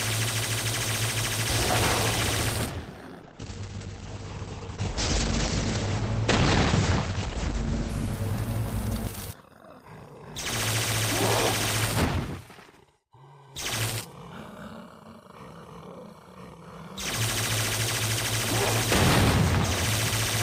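A call bitrate drop runs from 3.23 s to 9.95 s. The call's bandwidth estimate fell and the encoder was pushed to spend far fewer bits, so the audio is coded much more coarsely and turns rough and watery. The top end also closes in, from about 20 kHz down to 8 kHz, which muffles the sound. The worst stretch lasts about 4.4 s, and its quality fits a rate near 11 kbps, down from roughly 64 kbps before the drop.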